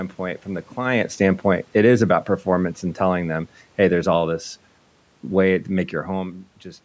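From 0.79 s to 4.48 s automatic gain falling pulls the level down by about 5 dB. The room background sinks along with the speech, unlike a talker simply moving away.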